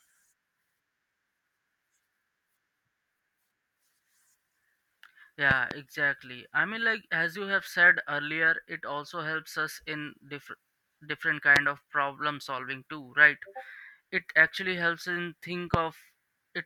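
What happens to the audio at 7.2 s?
Nothing goes wrong at 7.2 s: the speech runs on intact through that moment, with no dropout, click or other fault to be heard.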